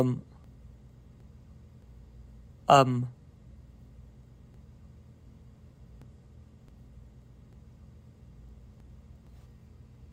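At 0.44 s and again at 6.02 s the audio jumps forward by roughly 0.4 s, at 8.80 s by about 0.7 s, and at 9.27 s by about 0.2 s. These are compressed frames skipped: whole blocks of about 92.9 ms each never reached the output, so playback lands further on than it should.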